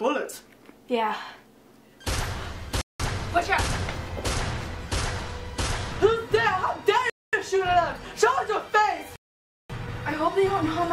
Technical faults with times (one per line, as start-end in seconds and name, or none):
2.81-3.00 Bluetooth stall
7.10-7.33 Bluetooth stall
9.16-9.70 Bluetooth stall